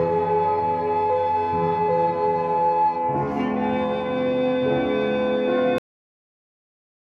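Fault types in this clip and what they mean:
Cut-off end: The music stops abruptly at 5.78 s, in the middle of the sound. There is no fade and no natural decay. The signal drops straight to digital silence, which lasts until the clip ends about 1.3 seconds later. This happens when the final buffers of audio are never written or never reach playback. The recording simply ends where the data ran out. The ending sounds chopped, not finished.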